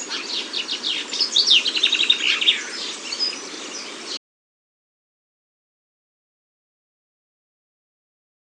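At 4.17 s the sound stops dead in mid-flow and never returns: everything from there to the end is complete silence, with no room tone or background hiss underneath, so whatever followed is simply missing. This is an audio dropout to silence, and the likely cause is that the input was lost, through a disconnected device, a failed link or an accidental mute, while the recorder kept writing silence for the remaining four seconds or so.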